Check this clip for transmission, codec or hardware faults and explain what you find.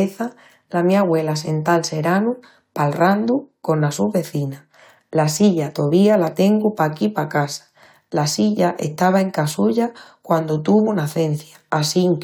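No faults found.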